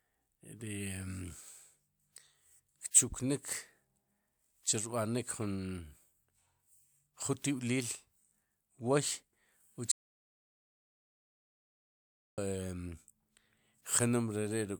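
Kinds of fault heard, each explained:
Audio dropout to silence: At 9.92 s the speech cuts off mid-flow and the clip falls into dead silence, with no room tone or background hiss at all, until the sound snaps back at 12.38 s. Roughly 2.46 s of speech is simply missing. The cause is likely a momentary loss of the input signal, such as a disconnected device, a broken link or an accidental mute, while the recorder kept writing silence.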